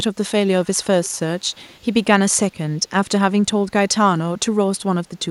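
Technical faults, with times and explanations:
0.64–0.85 s, 1.04–1.16 s and 1.39–1.84 s: echo leak. Brief scraps of a faint delayed copy of the speech trail the original by 271 ms, roughly 25 to 35 dB down. The likely cause is loudspeaker pickup at the far end that the echo canceller left unremoved.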